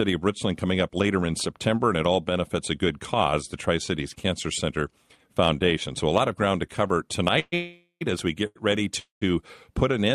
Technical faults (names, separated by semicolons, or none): call audio freeze; short stall from a late packet